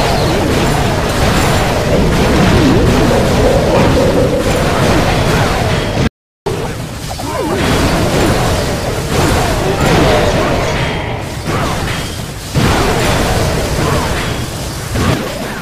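At 6.08 s the sound cuts off abruptly and stays silent until 6.46 s, an audio dropout to silence lasting about 386 ms with no room tone underneath. The input likely disconnected or muted briefly while recording continued, so that material is lost.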